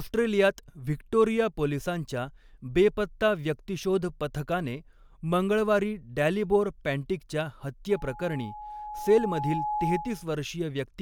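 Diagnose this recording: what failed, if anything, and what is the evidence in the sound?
Loudspeaker feedback squeal sets in at 7.90 s and runs to 10.31 s. The failure is in the acoustic loop between microphone and loudspeaker, ahead of any digital stage. A single tone near 842 Hz swells over about two seconds, ending up roughly as loud as the speech. The microphone is hearing the loudspeaker it feeds. At 842 Hz the loop gain has passed unity. So that frequency keeps reinforcing itself until the amplifier limits it or the loop is broken.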